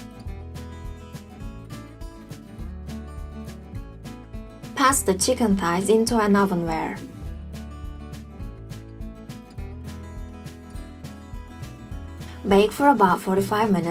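At about 10.67 s the quality suddenly drops and stays down right to the end. That's an adaptive stream switching to a lower bitrate: the connection slowed, so the player moved to a leaner encode without any gap. From there there's more smearing and swirly codec artefacts. The change sounds like a move from roughly 64 kbit/s Opus down to around 24 kbit/s.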